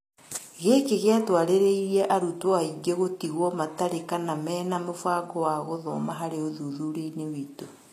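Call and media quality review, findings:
Gritty, lispy s sounds and a bright but synthetic-sounding top end throughout the clip, with nothing above 14.9 kHz and harmonics in the upper band not lining up with those below. Likely HE-AAC compression at a low bitrate, consistent with roughly 24 kbps. The codec keeps only the lower spectrum and regenerates the treble by copying bands upward under a coarse envelope. Damage plainly audible.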